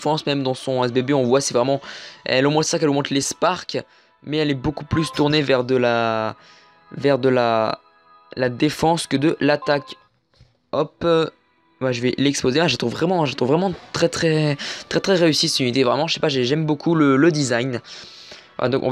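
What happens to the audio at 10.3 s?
Nothing goes wrong at 10.3 s; the audio plays through that moment intact, with no dropout, click or distortion.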